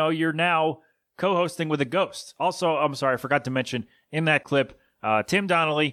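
No technical faults can be heard anywhere in the recording.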